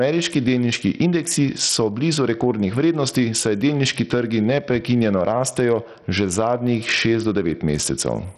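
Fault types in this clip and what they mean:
Gain pumping: Quiet parts are pushed closer in level to loud ones and the gain ducks by around 10 dB under each loud syllable, likely from a fast limiter fighting excessive gain.
Bluetooth SBC compression: Treble flickers in and out with a gritty, aliased edge rather than swirly MP3-style artefacts, heavy damage that points to a low SBC bitrate near 64 kbps.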